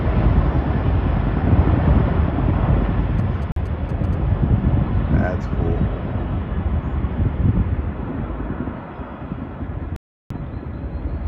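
From 3.19 to 4.15 s a galloping dit-dit-dit of short 217 Hz buzzes sits roughly 20 dB below the audio. These are GSM signalling bursts: a nearby 2G phone sends brief groups of radio bursts to its network, and the audio circuit rectifies them into audible sound.

Within that stretch, from 3.52 to 3.61 s, the sound cuts out for about 43 ms. It drops out again from 9.96 to 10.34 s, this time for about 341 ms, before returning. Each gap is a digital broadcast dropout. The receiver lost the signal or rejected corrupted frames and muted until good frames arrived. The two gaps fit one and eight lost frames, and whatever was sent during them is gone.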